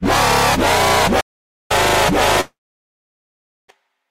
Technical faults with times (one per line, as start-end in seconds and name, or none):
1.20-1.71 playback stall
2.41-3.70 long network dropout